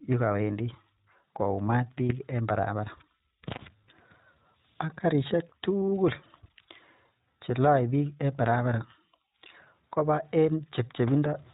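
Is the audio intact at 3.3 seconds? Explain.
No, iLBC codec damage covers 3.3 s as it does the whole clip. Each 20 ms frame is coded alone at a rate that fits 15.2 kbps, with nothing above 4 kHz, so the speech sounds dull, slightly rough and synthetic.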